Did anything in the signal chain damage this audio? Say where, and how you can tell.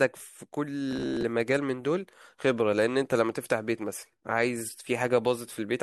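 Yes. From 0.91 to 1.23 s the speech turns into robotic sound from repeated short buffers, a rigid metallic buzz near 66.8 Hz that still roughly tracks the phrasing. The likely cause is at the driver or buffer stage: audio arrived too seldom, so about half of that stretch was filled by looping a roughly 15 ms slice. The steady buzz pitch, set by the loop length, distinguishes it from codec warbling or network dropouts.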